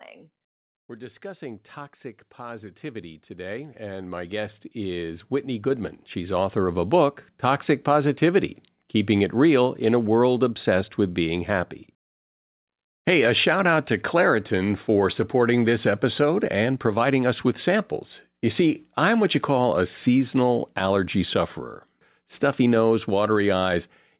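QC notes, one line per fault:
0.98–6.88 s, automatic gain rising: the level of the speech and the background climbs together over nearly six seconds, ending about 19 dB louder than where it began. The call's automatic gain control judged the input too quiet and stepped its gain up slowly, so the room noise swells along with the speech. On the waveform the envelope widens steadily across this stretch, and on a spectrogram the noise floor between phrases brightens in step with the speech.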